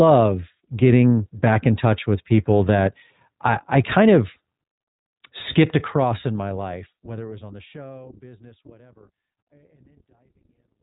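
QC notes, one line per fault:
Throughout, iLBC codec: nothing above 4 kHz and a plainly rough, synthetic edge, since each 20 ms frame's excitation is coded alone; fits the 15.2 kbps mode.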